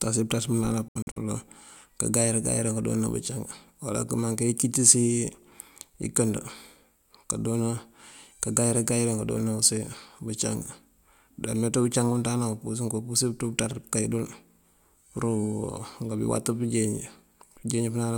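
Bluetooth dropout from 0.88 to 1.18 s in this speech recording: several silent gaps, the longest about 70 ms, likely from wireless packets arriving too late and being discarded.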